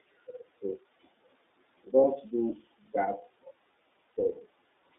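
The whole speech clip passes through the iLBC codec. The band runs only from 250 Hz to 3.7 kHz, so it sounds thin. Each frame is coded alone, and the damage is plainly audible as a rough, synthetic edge. This fits iLBC's 30 ms frame mode at 13.33 kbps.

Lost iLBC frames occur from 2.01 to 2.04 s and from 4.11 to 4.14 s. Each gap is a single 30 ms frame. The decoder fills it by repeating the last pitch cycle with added noise. It sounds like a brief buzzy hold, and the voice is right again almost at once.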